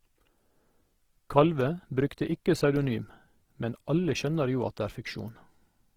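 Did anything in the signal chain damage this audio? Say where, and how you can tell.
Yes, at the codec stage, and the damage runs through the whole clip. The speech sounds grainy and rough, with tonal parts turned noisy, yet there are few swirling holes and the band stays full, reaching about 20 kHz. That points to Opus compression, likely in its CELT music mode at a low rate near 16 kbps. Starved of bits, the encoder keeps each band's energy but fills detail by folding or noise.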